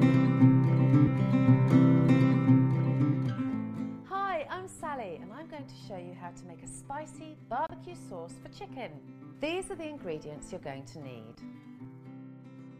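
A corrupt frame decoded at 7.67–7.71 s puts a brief glitch, peaking around -30 dBFS, across a few frames, showing as a short misplaced smear on a spectrogram.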